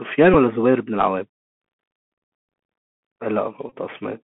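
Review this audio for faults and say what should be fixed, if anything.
The whole clip is carrying the Bluetooth CVSD headset codec, and it's plainly audible. The band sits at roughly 200 Hz to 3.5 kHz, so everything above is simply gone. CVSD sends one bit per sample, saying only up or down with an adapting step, which fits a 64 kbps headset link. Bright consonants outrun that step and go scratchy, and there's a grainy hiss riding under the speech. To prevent it, use a wideband (mSBC or LC3) headset profile, or record from a wired or local mic.

There are two Bluetooth headset packet repeat faults, where lost voice packets got patched by replaying the previous packet's bits. The first is at 0.34 s, covering about 11.2 ms, which fits roughly three packets. It comes across as a short, tight buzzy tick. The second runs from 3.69 to 3.73 s, about 22.5 ms lost, which fits roughly six packets. 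That run repeats every 3.75 ms, so you hear a brief buzz near 267 Hz. To prevent it, keep the headset close to the phone and away from Wi-Fi congestion so the link stops dropping packets.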